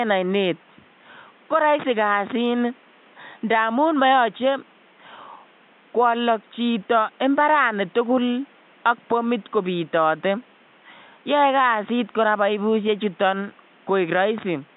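No technical faults can be heard anywhere in the recording. A faint room noise sits about 33 dB below the speech, and it belongs to the space the microphone was in rather than to the system.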